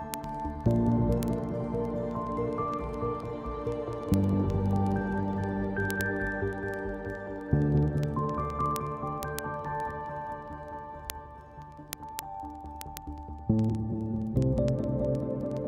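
From 0.14 s to 15.67 s, word clock ticks run throughout. The receiving device is not locked to the sender's clock, which drifts by roughly 400 parts per million. About every 0.05 s, one sample slips. This produces a steady train of sharp ticks, around twenty per second.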